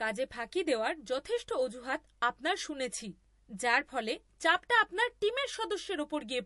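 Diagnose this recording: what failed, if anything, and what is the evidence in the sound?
The failure is at the codec stage: the recording is likely low-bitrate audio saved at a high bitrate, an MP3 encoded at around 48 kbit/s and later re-encoded as a much larger MP3, perhaps near 192 kbit/s. For the whole of the speech, the spectrum stops dead at about 11.3 kHz. That ceiling was set by the first, starved encoder, and the second encoder cannot rebuild anything above it, so the file is large but the missing treble stays missing.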